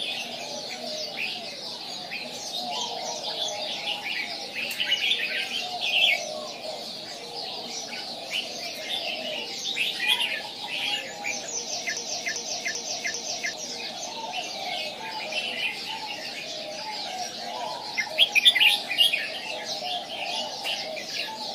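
At 11.97 s the audio locks into a broken-record loop: a fragment of about 0.39 s plays four times back to back, exactly identical each pass, until normal playback returns at 13.54 s. The repetition has a mechanical, stuttering regularity, and whatever should have sounded during that interval never arrives. The likely cause is a stall in the player, encoder or stream, which kept re-sending the last chunk it held instead of new material.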